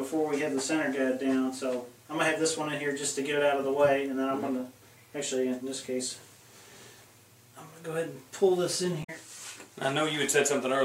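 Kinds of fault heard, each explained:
Damaged data in a compressed stream: corrupted bytes make the decoder misread frames and resynchronise, giving a brief chirp or blip from 9.00 to 9.10 s.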